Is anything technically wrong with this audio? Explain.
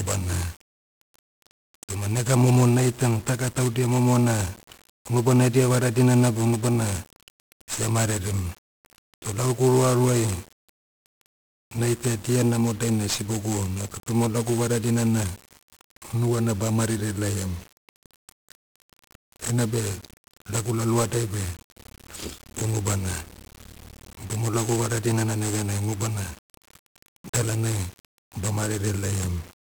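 Yes. Throughout, the speech has passed through 1-bit DFPWM compression, which points to about 48 kbps, one bit per sample steering an adaptive level, leaving heavy fuzzy crackle and hiss-buried treble.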